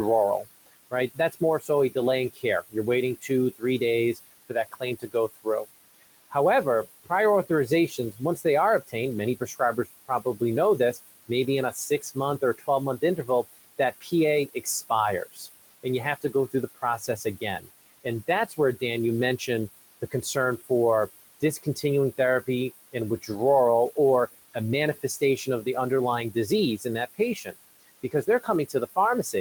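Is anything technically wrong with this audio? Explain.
Yes. Noise suppressor artifacts run throughout: the suppressor pulls steady background down by about 18 dB per frame, so the room noise, sitting about 15 dB under the speech, pumps, sinking between words and rising under them. Speech cut by the noise suppressor occurs at 0.66–6.35, 7.04–18.82, 20.02–20.7, 21.41–23.3, 24.54–25.67 and 26.34 s to the end. Quiet speech misread as noise drops by up to about 21 dB, leaving soft syllables swallowed, totalling around three seconds in the first two spans.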